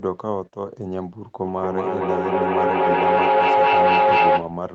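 At 1.42 s a feedback howl kicks in and runs right through to 4.68 s. What's happening is a loop: the sound leaves a loudspeaker, gets picked back up by a microphone in the same room, and comes out louder each trip. So the repeats pile up instead of dying away, narrowing onto a tone around 1 kHz that pulses roughly every fifth of a second and peaks about 9 dB above the speech. The speech itself tops out around 8 kHz.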